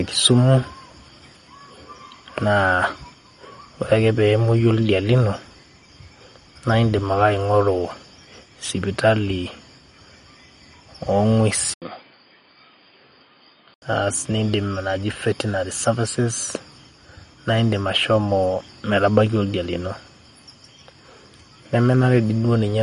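All the way through, the speech has that watery, swirly quality, with s sounds going metallic and nothing above about 11.2 kHz. That's likely MP3 compression at a low bitrate, something like 48 kbps. The encoder runs short of bits, so it chops the treble at a fixed point and keeps dropping quiet frequency detail in and out from frame to frame, which is where the swirl comes from. The damage is plainly audible.

At 11.74 s there's a short gap of about 80 ms, and then the sound turns dull and boxy until 13.82 s. It's a few dB quieter, nothing above about 4.9 kHz gets through, and a new noise floor comes in, roughly 55 dB under the speech. The likely cause is the input switching to a poorer device, such as another microphone or a headset's call mode, whose narrow band and different tone show up straight away.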